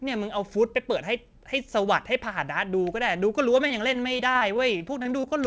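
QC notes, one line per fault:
3.68–5.30 s, repeated packet loss (robotic sound): over this stretch of speech the audio keeps breaking up, with a dozen or so short holes, the longest about 23 ms. Each hole is bridged by extending the preceding sound, so roughly an eighth of the span is patched rather than heard. That patching gives a choppy sound with pieces missing instead of clean silent dropouts, and the holes recur close together rather than as one isolated glitch. It sits on a call path with nothing above 8 kHz, consistent with G.722 wideband coding.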